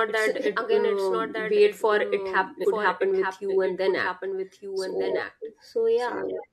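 A second copy of the speech is likely being captured by a slower path or held out of step in an edit, producing a doubled audio track throughout: a full-band echo trails about a second behind, roughly 5 dB quieter, with no decay or room colour.

At 2.60 to 2.65 s, compressed frames are skipped: the decoder never plays a run of about seven frames, which fits a frame length near 46 ms. The speech jumps ahead by roughly 0.3 s, landing on "happen with you and".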